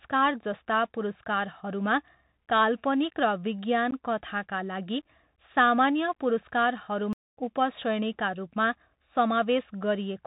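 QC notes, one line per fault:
throughout, Bluetooth CVSD headset codec: the speech has been carried over a narrowband CVSD headset link at 64 kbps, coding one bit per sample as a step up or down with an adapting step size. Nothing above 4 kHz survives, so the voice sounds boxed in and thin. Where the signal rises fast the step cannot keep pace, and sibilants turn scratchy. A grainy hiss sits under the speech for the whole clip, and the damage is plainly audible.
3.91 to 3.93 s, unconcealed Bluetooth headset packet loss: about 15 ms of audio drops out just before "कथाका लागि सामान्य", roughly four packets' worth of the link's short voice frames. Nothing fills the gap, so the speech is cut by a brief hole with hard edges. The sound after it resumes slightly quieter for a moment as the CVSD step size rebuilds from a small value.
7.13 to 7.37 s, playback stall: the output goes silent for about 239 ms mid-flow, then resumes with "उपश्रेणीका रूपमा". 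The sound stops abruptly and picks up again after a clearly noticeable gap rather than a brief click. The likely cause is the player running short of data or its audio thread being blocked, so no samples reached the output until it recovered.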